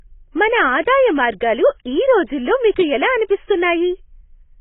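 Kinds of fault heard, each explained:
AAC compression, throughout: the speech has nothing above 3.8 kHz and sounds dull and smeared, with a warbling texture. The likely cause is a heavily compressed AAC-LC encode, consistent with about 16 kbps, where the encoder lowers its cut-off and quantises each frame coarsely.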